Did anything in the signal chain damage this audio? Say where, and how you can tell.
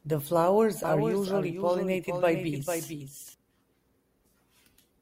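Yes. From 0.84 to 3.34 s a doubled audio track appears: a full-band copy trails about half a second behind, around 5 dB quieter, with no decay. A spectrogram shows each speech pattern repeated at that offset, beginning and ending abruptly, likely from a second, slower capture path in the driver or routing.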